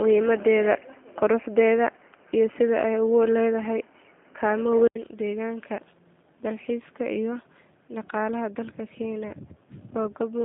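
From the start until 4.95 s the input was likely switched to a poorer device, one with a narrower band. Nothing above 3.1 kHz comes through, so the speech is dull and boxy. Its own faint background noise sits well below the speech. At 4.95 s the input returns to the better path, with a silence of about 80 ms at the switch. After it the sound opens up and the level shifts by a few decibels.

Throughout the clip the G.729 codec (G.729A at 8 kbit/s) is plainly audible. It does not carry the waveform itself. It rebuilds each 10 ms frame from a vocal tract filter, a pitch predictor and a handful of pulses. The line band runs from 150 Hz to 3.7 kHz, with nothing above 3.8 kHz, so the speech sounds thin and telephone-like. It also has a rough, slightly synthetic texture.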